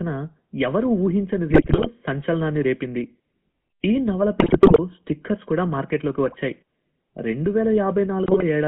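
The whole clip carries the sound of the GSM full-rate codec. The speech is squeezed into a telephone band of about 150 Hz to 3.4 kHz. The codec rebuilds each voice from a vocal-tract model and a sparse pulse train. That leaves a plain buzzy, gravelly roughness, which fits a 13 kbps coder.

GSM bit errors break through in four bursts: 1.50 to 1.87 s, 4.40 to 4.79 s, 6.26 to 6.35 s, and 8.24 to 8.43 s. Corrupted filter, pitch and gain values reach the decoder. The speech turns to squawks, pops and gargling.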